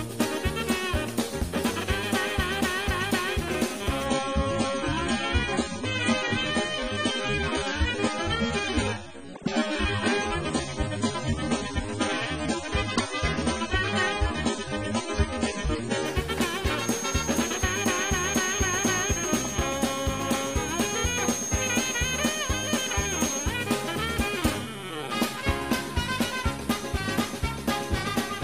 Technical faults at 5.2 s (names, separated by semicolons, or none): adaptive stream at a lower bitrate